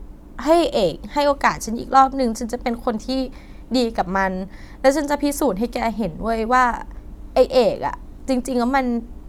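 No technical faults can be heard in this recording.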